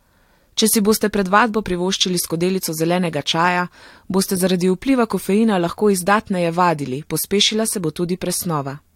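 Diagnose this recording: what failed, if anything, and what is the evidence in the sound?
Nothing in this speech recording points to a failure at any stage of the chain. There is no audible event to trace, so there is no mechanism to diagnose.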